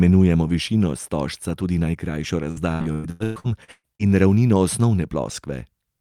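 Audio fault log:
2.51–4.02 s, repeated packet loss (robotic sound): after "višino stožca tudi najkrajšo", repeated gaps up to 119 ms are filled by stretching prior sound, leaving choppy speech with smeared, repeating spectrogram blocks.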